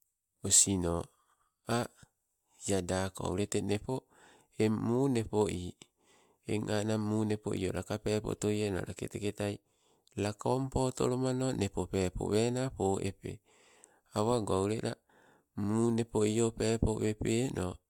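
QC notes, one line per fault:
No faults found, so there is nothing to list in these QC notes.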